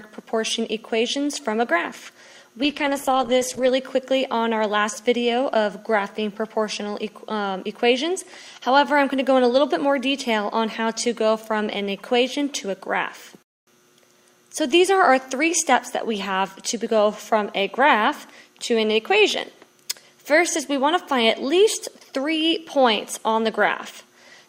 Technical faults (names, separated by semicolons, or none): call bitrate drop